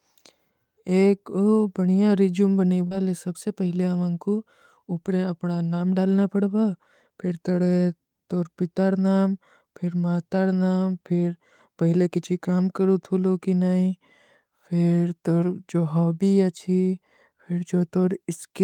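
A speech clip with one short concealed packet loss at 2.87 to 2.93 s: about 40 ms of audio arrived too late for the decoder, and the receiver filled 35 ms by extending the preceding sound before blending back, leaving a brief smear just before "ଲେ ସବସେ ପହଲେ ହମାଂକୋ".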